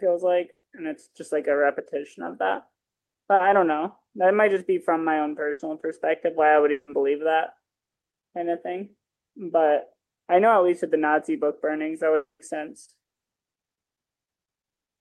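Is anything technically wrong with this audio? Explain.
Yes, there are a few network hiccups in this speech.

Burst of packet loss at 0.51 to 0.66 s and 5.51 to 5.62 s: a run of packets went missing, so the receiver stretched the last sound into a fading buzz or hiss, about 120 ms and 80 ms. The first ends in a brief silence before the speech jumps ahead.

Short concealed packet loss at 3.35 to 3.42 s: about 40 ms never arrived in time. The decoder papered over it, leaving a quick smear or wobble.

What sounds like a long network dropout at 6.71 to 6.90 s and 12.15 to 12.42 s: likely audio stopped arriving for a while. The filled sound fades, into about 140 ms of silence in the second case, then speech resumes with 160 to 240 ms gone.

The audio rolls off around 12 kHz, which fits an Opus call path near 48 kbps.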